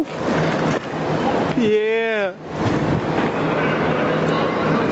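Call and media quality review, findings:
Gain pumping, throughout the clip. Level swells between loud sounds, then ducks under each one, a swing of around 15 dB. Likely cause: input gain set far too high, with a fast limiter or compressor clamping each peak. Waveform: flattened, near-uniform peak envelope; quiet parts rising between bursts. Spectrogram: quiet passages brightening in pauses, dimming under loud events. Band stops near 8 kHz, consistent with the Opus call path.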